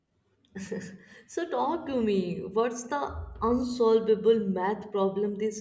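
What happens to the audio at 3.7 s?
Nothing goes wrong at 3.7 s: the speech carries on intact there, with no dropout, click, distortion or other fault.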